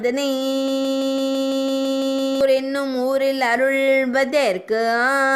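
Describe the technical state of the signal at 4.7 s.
At 4.7 s the signal is intact, with no dropout, distortion, glitch or other fault audible at that moment.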